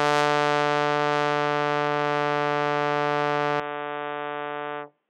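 Input switched to a poorer device at 3.6 s in this music: without a gap, it turns dull above 3.8 kHz, drops about 5 dB and gains faint noise, likely a switch to another microphone.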